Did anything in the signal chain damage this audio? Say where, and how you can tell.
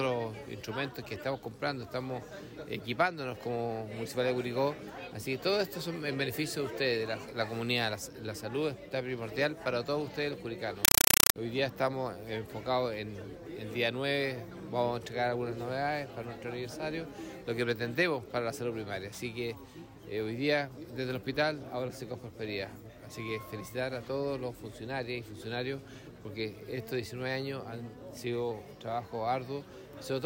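Yes. From 10.85 to 11.36 s the sound gives way to loud chattering static: noise bursts of about 5.3 ms repeating 31.25 times a second. That is a compressed stream played as audio. An AC-3 bitstream on the digital link went undecoded at playback and was treated as ordinary samples.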